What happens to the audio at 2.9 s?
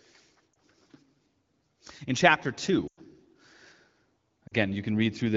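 Lost AMR speech frames, 2.87 to 3.00 s: the wideband decoder fills the 100 ms gap with fading repeats, so speech sinks to near silence, then returns briefly weak or rough.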